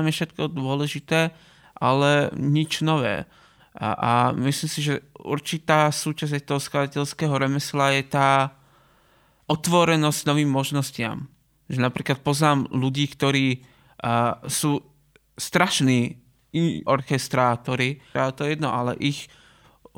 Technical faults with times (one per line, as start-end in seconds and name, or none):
none